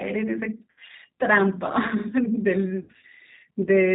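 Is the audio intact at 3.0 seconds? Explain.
No. VoIP packet loss concealed by the speech codec affects 2.83 to 3.05 s. About 120 ms of audio went missing, scattered over 200 ms with gaps up to 60 ms. The decoder filled them by extending its last pitch and vocal tract filter at falling gain, so the voice there smears into a fading buzz or coloured noise and stays weak as it recovers. The whole clip also carries G.729 codec damage, consistent with an 8 kbit/s G.729A stream. The audio is rebuilt from a coarse filter and sparse pulses, so it lacks everything above 4 kHz and sounds plainly rough and synthetic at 3.0 s.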